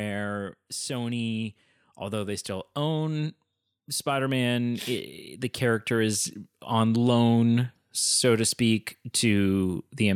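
Speech, with automatic gain rising from 0.86 to 3.38 s. The gain control lifts the level by about 5 dB. Voice and background swell together.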